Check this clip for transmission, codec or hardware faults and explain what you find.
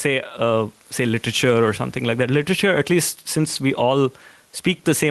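One hardware fault runs through the whole speech clip. The room noise sits about 39 dB below the speech.

Gain pumping, throughout: the level swings by roughly 5 dB, likely from over-high input gain reined in by a fast limiter on each loud sound, squashing dynamics.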